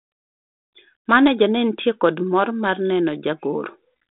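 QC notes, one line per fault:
Nothing to flag here; the speech comes over a G.726 ADPCM link at 32 kbit/s, as on a DECT cordless phone, with the usual telephone band of roughly 200 Hz to 3.7 kHz and only the light coding roughness you'd expect from that rate.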